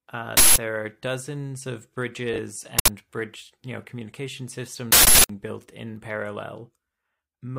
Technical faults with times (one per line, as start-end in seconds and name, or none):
0.37-0.56 uninitialised buffer
2.33-2.39 frames out of order
2.79-2.88 uninitialised buffer
4.92-5.29 uninitialised buffer